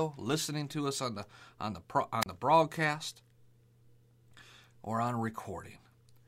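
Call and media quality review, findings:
Wireless microphone squelch dropout, 2.21–2.26 s, after "the on the pro", before "the broadcast". Brief hiss swell, then about 30 ms near-silent mute. Receiver squelch gating a faded FM carrier. Spectrogram shows a broadband noise smear, then a blank vertical gap; waveform flatlines briefly.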